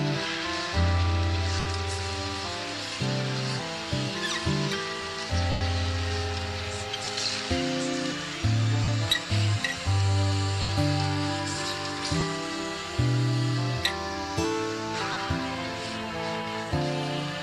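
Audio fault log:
1.60–1.66, 5.51–5.61, 7.05–7.07, 8.84–8.88, 10.62–10.69, 12.20–12.22, 15.13–15.16 s: lost LE Audio frames. Gaps of 20 to 100 ms, fitting 10 ms frames, are concealed by repeating the last spectrum with scrambled phase, producing a brief noisy smear. On a spectrogram, harmonics blur into broadband noise, fading by the 100 ms gap. On the waveform, the envelope sags.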